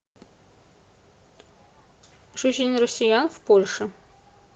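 No dropouts, distortion, timing errors or other technical faults can be heard anywhere in this recording of speech.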